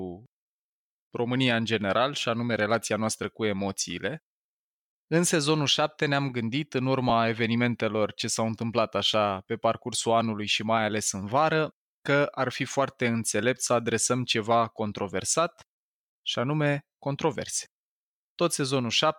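At 7.09 s, between "gândit în" and "evenimentelor ce", lost LE Audio frames leave a 7.5 ms hole, consistent with one dropped LC3 frame. The decoder reuses the prior spectrum with random signs, giving a brief noisy smear; spectrograms show a thin vertical strip where harmonics blur.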